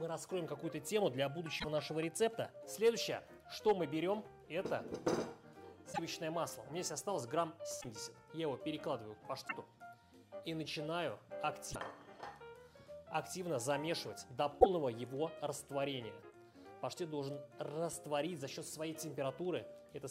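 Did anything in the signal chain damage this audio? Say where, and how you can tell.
Yes. Six brief jumps with chirpy or noisy bursts occur at 1.58, 5.92, 7.80, 9.47, 11.72 and 14.59 s. Each lasts 40 to 70 ms, about two or three 26.1 ms frames. This likely comes from a broken MP3 bit reservoir at the codec stage. Frames went missing, so the following frames borrowed the wrong bytes.

Hard clipping hits at 2.85 s and 3.68 s, each lasting about 40 ms. The first overloads by about 2 dB, the second by about 4 dB. A converter or sample-format stage cut the peaks flat. The flat tops add high harmonics, heard as brief crackle.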